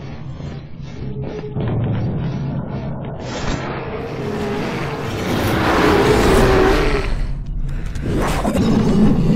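From 0.0 to 4.0 s the audio plays as an adaptive stream starting at a low bitrate. Nothing sounds above about 7.6 kHz, and the encoding artefacts are strong. The sound points to an AAC stream at roughly 16 kbit/s, chosen so playback could begin before the connection had been measured. At 4.0 s the player steps up to a better version, which fits about 96 kbit/s. The treble returns and the artefacts ease at once, with no gap in the audio.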